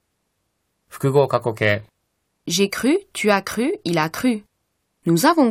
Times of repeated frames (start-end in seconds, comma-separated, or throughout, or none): none